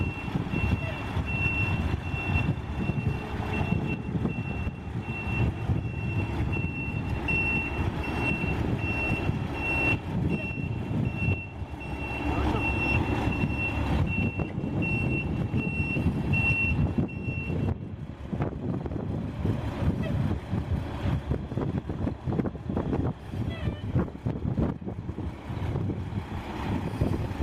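At 4.79 s, compressed frames are skipped: about one frame, fitting a 23.2 ms frame length, never plays. The sound jumps ahead with no silent gap.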